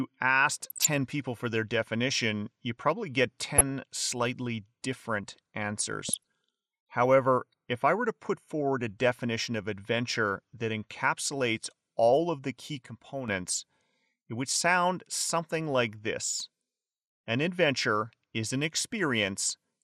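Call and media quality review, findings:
MP2 compression, whole clip: speech dull and gurgly, with granular grit from coarse quantisation and upper sub-bands dropping in and out. Damage plainly audible. Likely an MP2 encode, and the sound points to a low rate around 80 kbps, where bit starvation switches off whole high bands.

DAB burbling, 0.70 to 0.87 s, just before "people for their definition": blips of noise from sub-bands glitching. Bit errors getting past error correction into the MP2 stream. Again at 3.58 s, between "definition you probably get" and "slightly different". Short one, same blippy texture. Longest patch is 5.94 to 6.23 s, right after "slightly different": burble as corrupted samples and scale factors knock single sub-bands around.

Sudden gain jump, 12.86 to 13.28 s: speech and background noise drop together by about 7 dB for that stretch, with hard steps in and out and no fade. 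Likely a digital gain change applied without a ramp, as from a level setting or bit shift snapping from one sample to the next.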